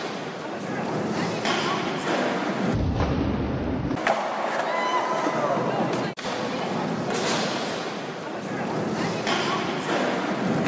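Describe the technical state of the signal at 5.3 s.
Nothing at 5.3 s points to a technical fault; the signal is intact at that moment.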